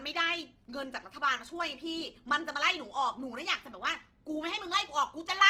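Across the whole speech clip, likely Opus compression in its music mode at around 16 kbps fills starved bands with noise, leaving a plainly audible grainy, rough texture.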